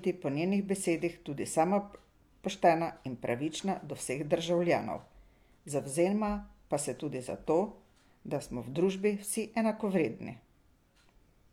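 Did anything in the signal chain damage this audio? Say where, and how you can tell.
No, nothing in the chain audibly damaged this speech.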